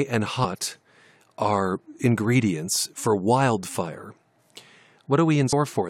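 Right near the start, at 0.43 s, there's a short blip in the speech, and the same thing happens again near the end at 5.52 s. Both are damaged data in a compressed stream: a bit of the encoded stream got mangled, so the decoder couldn't make sense of those frames, lost sync, and had to hunt for the next valid frame header. Each glitch lasts under 20 ms.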